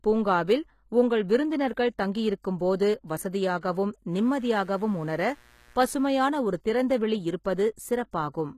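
Throughout the speech, the treble sounds synthetic and gritty, with plainly audible codec damage and nothing above 14.9 kHz. The likely cause is HE-AAC compression at a low bitrate, which fits about 20 kbps. Spectral band replication rebuilds the upper band from copied lower bands, so a spectrogram shows smeared, repeated-looking texture above the crossover and a hard ceiling at the cutoff.

At 3.60 to 3.63 s, pre-echo spreads a 31 ms wash of hiss ahead of an attack. Quantisation noise sized for the loud onset was spread across the whole transform block, including the quiet moment before it. The waveform shows a low noise skirt leading the transient, and the spectrogram shows a faint broadband smear before it.

From 4.10 to 6.31 s, mains buzz sits roughly 30 dB below the speech as a steady, raspy buzz. Sharp switching spikes at every half of the 60 Hz mains cycle produce a dense ladder of harmonics. 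On a spectrogram these appear as evenly spaced horizontal lines at multiples of 60 Hz, reaching up to several kilohertz.

At 7.76 to 7.78 s, pre-echo appears again, spreading 21 ms ahead of an attack. It has the same block-noise cause, so the onset sounds softened with a brief hiss leading into it. The waveform again shows a small noise lead-in before the transient.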